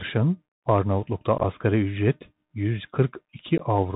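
A speech recording carried over a Bluetooth CVSD headset codec, with plainly audible damage throughout. The bandwidth stops at 4 kHz, so a spectrogram shows a hard ceiling with nothing above it. The one-bit delta modulation, consistent with a 64 kbps CVSD link, leaves a granular hiss under the speech. Its adaptive step falls behind on loud, bright sounds, so sibilants turn scratchy and transients distort. In the waveform this shows as slope-limited, stair-stepped edges.

There is also unconcealed Bluetooth headset packet loss. From 1.38 to 1.44 s about 30 ms of audio is missing, scattered across 60 ms as a few short gaps, the longest 15 ms. It sounds like a brief chopped crackle. At 3.58 s a single gap of 15 ms drops out. Each hole is a flat or idle stretch with abrupt edges in the waveform and a thin vertical blank in the spectrogram. The speech returns quieter for a moment as the CVSD step size recovers.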